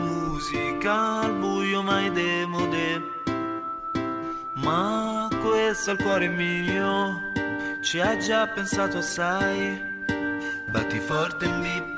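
No technical faults can be heard anywhere in the clip. The audio has passed through a working call path, and nothing reaches above 8 kHz, which fits a wideband codec such as G.722.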